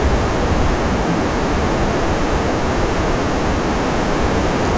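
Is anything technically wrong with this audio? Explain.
No, nothing technically wrong turns up here; this speech recording comes through without any fault worth pointing to.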